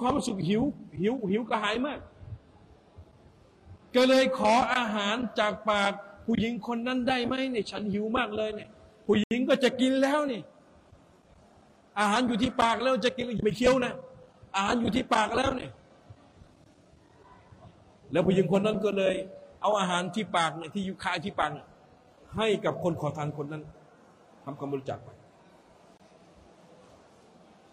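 A likely Bluetooth stall appears at 9.24 s, where the audio drops to silence for 75 ms until 9.31 s, and again from 25.97 to 26.00 s with a shorter 23 ms gap. Each time, the wireless link seems to have held back packets long enough for the receiving buffer to empty. Playback simply halts with a clean hole in the sound, then resumes once the delayed data arrives.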